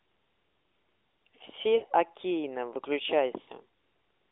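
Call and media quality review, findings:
Lost AMR speech frames, 1.76–1.85 s and 3.42–3.49 s. Radio-side bit errors failed frame checksums; the AMR-NB decoder concealed each gap by repeating the last good pitch and vocal tract parameters at decaying gain. Each gap is about 60 ms, which fits three consecutive 20 ms frames. Heard as a short smeared, stretched sound fading toward silence, then a brief weak, rough restart. This happens over the narrowband 300 Hz–3.6 kHz line, which carries light codec colouring.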